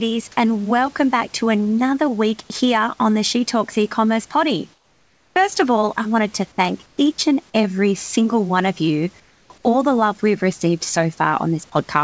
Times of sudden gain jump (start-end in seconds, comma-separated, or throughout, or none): none